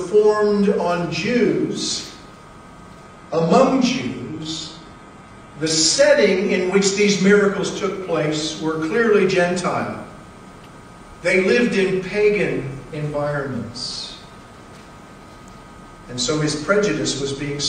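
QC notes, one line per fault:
3.05–7.05 s, adaptive stream at a lower bitrate: the quality drops abruptly and without a gap, then recovers just as suddenly after four seconds, as though the stream switched down while the connection slowed. The treble drops away and codec artefacts rise, which fits a move from roughly 96 kbit/s AAC to a 16 kbit/s HE-AAC version. On a spectrogram, the energy above 15 kHz vanishes along a sharp horizontal edge with vertical boundaries at both ends, and the waveform shows no dropout.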